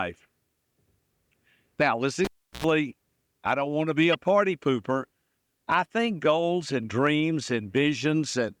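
At 2.25 s a sharp pop cuts the speech into near silence lasting about 0.35 s. A short burst of 60 Hz mains buzz follows for roughly 90 ms, and a second pop brings the sound back at 2.64 s. This is a cable pulled and plugged in. The live lead was withdrawn, leaving the signal path open. As it went back in, the tip touched first and picked up hum before the connection seated fully.

From 4.12 to 4.15 s a brief, harsh blip breaks through, peaking at around -15 dBFS. It has the smeared, out-of-place spectral character of a corrupt frame decoded. Flipped bits in the compressed data made the decoder rebuild that stretch with wrong gains or misread codes, so energy landed at frequencies that don't belong there. The burst's length of about 26 ms points to a single damaged frame.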